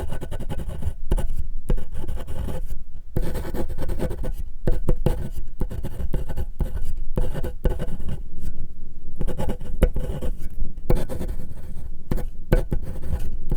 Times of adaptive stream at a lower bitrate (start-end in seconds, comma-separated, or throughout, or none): 7.87-13.56